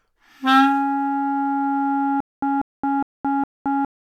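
From 2.20 s to the end, the audio falls into a stutter with silent gaps. A 191 ms fragment repeats four times, each followed by about 220 ms of digital silence, every 411 ms. The player likely stalled, replaying its last fragment at each retry.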